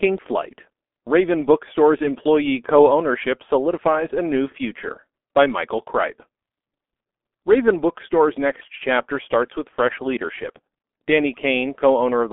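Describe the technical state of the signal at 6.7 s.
At 6.7 s the G.723.1 codec is at work, as it is across the whole clip. This low-rate telephony coder packs the speech into long 30 ms frames with a slowly updated voice model, and the heavy damage fits a bitrate around 6 kbit/s. The telephone band runs from 250 Hz to 3.4 kHz, with nothing above 3.6 kHz, so the speech sounds muffled and hoarse, with smeared consonants.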